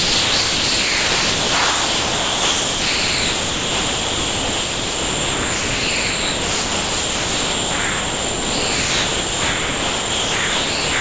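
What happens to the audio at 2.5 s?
At 2.5 s the sound is dropped by the voice detector, and this covers the whole clip from 0.0 to 11.0 s. Only steady comfort noise is heard, likely because the sender's detector treated the sound as background and stopped transmitting.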